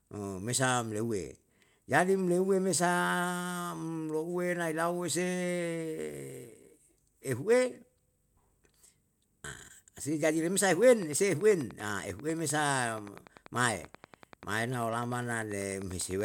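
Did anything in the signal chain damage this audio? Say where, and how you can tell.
Yes. From 10.82 s to 16.22 s a train of clicks rides over the speech, most likely from electrical interference coupling into the analogue wiring from nearby equipment. The pulses are near-identical and arrive at a steady 10.2 per second, about fifty in all, which points to a periodic external source rather than random damage. Each one peaks roughly 5 dB above the speech, so the ticking stays plainly audible through the pauses as well as under the speech.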